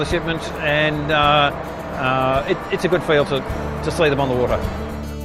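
No technical faults can be heard in this audio, and the signal comes across with nothing in it that points to a problem in capture, processing or playback.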